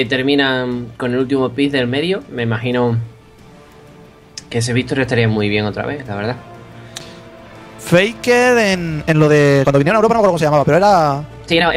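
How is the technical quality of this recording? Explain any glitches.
One glitch stands out near the end. From 8.69 s to the close at 11.76 s the sound turns rushed, running about 1.93 times faster without a pitch change, likely a time-stretched section where short pieces were dropped to squeeze it.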